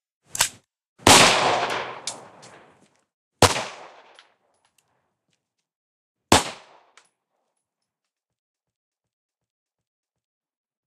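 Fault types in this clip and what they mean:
System hang loop: a frozen system left the hardware replaying one buffer, so a 0.37 s slice stutters five times from 8.55 to 10.40 s.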